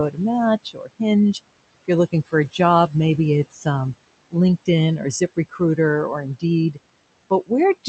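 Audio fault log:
throughout: noise suppressor artifacts. A suppressor is pulling down the bands it judges to be steady noise, frame by frame, by about 20 dB, so the room noise, sitting about 17 dB below the speech, dips in the pauses and swells under speech.
0.64–1.01 s, 3.51–3.66 s (right after "a job maybe"), 4.98–5.78 s: speech cut by the noise suppressor. The suppressor mistook parts of the speech for noise and turned them down with the background, by up to about 18, 12 and 14 dB respectively, roughly 150 to 200 ms in each span, so soft sounds there come out swallowed and faint.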